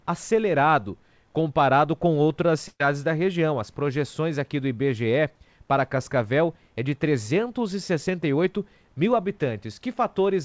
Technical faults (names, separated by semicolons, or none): burst of packet loss